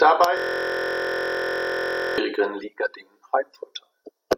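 A speech recording with a system hang loop from 0.37 s to 2.18 s. The machine appears to have stalled while the audio hardware kept replaying the same 23.22 ms stretch of its ring buffer, which fits a 1024-sample buffer, about 78 times over. At 43.1 Hz this is heard as a steady buzz. The waveform shows identical short blocks repeating, and the spectrogram shows evenly spaced horizontal lines at multiples of 43.1 Hz.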